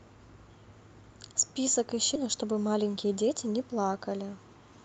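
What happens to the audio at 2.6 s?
At 2.6 s the speech is inside a jitter buffer speed-up running from 2.25 to 3.35 s. The receiver, holding excess buffered audio, cut short pitch-period segments repeatedly, roughly a tenth of a second in total. Speech plays about 8% faster at unchanged pitch, sounding hurried.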